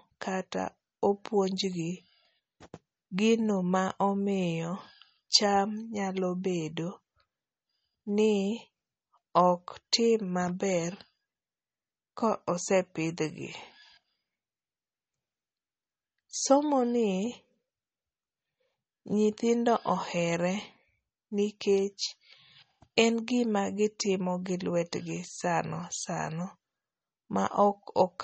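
Throughout, the speech sounds watery and swirly with nothing above 8.4 kHz, likely from MP3 compression at a rate fitting 32 kbps, which stripped treble and weak detail.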